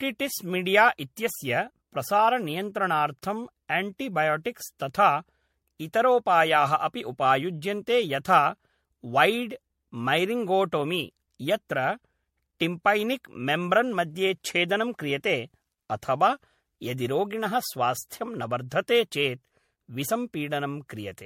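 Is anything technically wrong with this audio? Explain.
Yes, there's generation loss across the whole speech clip. It sounds swirly and hollow, with a smeared, watery texture and soft, blurred consonant attacks, and nothing comes through above about 16.6 kHz. That's more damage than one pass at what sounds like 64 kbit/s MP3 would leave, so it's likely been decoded and re-encoded around five times. Each pass requantises on a shifted frame grid, so the noise and spectral holes keep stacking up.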